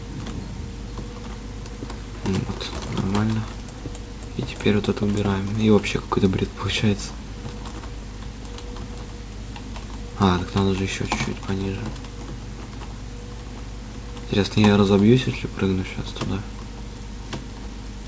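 No technical faults can be heard anywhere here.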